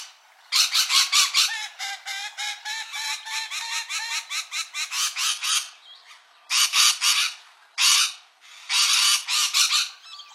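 Everyday sound recording with an adaptive stream at a lower bitrate from 5.28 to 9.28 s: treble abruptly vanishes above 12.3 kHz with no gap; the spectrogram shows a sharp-edged missing top band.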